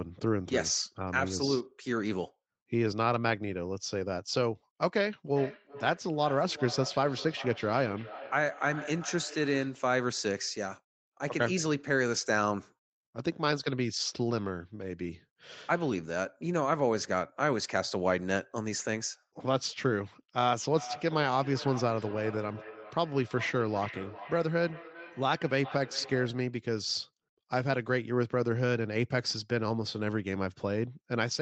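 From 5.36 to 9.88 s, and again from 20.44 to 26.52 s, the speech returns as feedback echo between two devices. A second device in the room plays the call aloud. The microphone picks it up and sends it back. Its echo canceller cannot remove that. Each phrase repeats roughly every 0.4 s, thinner and more ringing each pass. The repeats peak at about 14 dB and about 15 dB below the speech.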